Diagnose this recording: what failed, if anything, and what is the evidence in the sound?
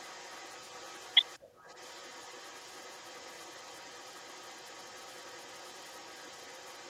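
An echo leak in the call processing runs from 0.0 to 1.39 s and again from 1.56 to 6.9 s. A faint copy of the speech trails it by about 214 ms, well down in level. Likely the far end's echo canceller isn't fully suppressing what its loudspeaker feeds back into its microphone.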